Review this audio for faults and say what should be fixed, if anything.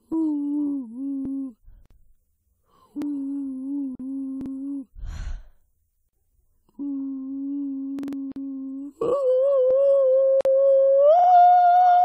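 Repeated buffer at 1.25, 3.02, 4.41, 7.99, 9.71 and 11.19 s: new audio arrived late, so the device replayed its last 46 ms block, which fits a 2048-sample buffer. The block plays once more at most points, but two extra times at 4.41 and 11.19 s and four extra times at 7.99 s, heard as a stutter in the music. On a waveform these are identical blocks butted together with hard seams, and a spectrogram shows thin vertical lines at each join. Enlarge the playback buffer or keep it fed sooner.

Gap at a join of encoded pieces at 1.86, 3.95, 6.09, 8.32 and 10.41 s: separately encoded segments were joined with their encoder start delay and end padding left in. The music drops out for about 43 to 50 ms and then resumes where it stopped. On a waveform this is a flat silent strip with slightly smeared edges, and on a spectrogram a blank vertical band. Trim the encoder delay and padding, or encode gaplessly, before joining.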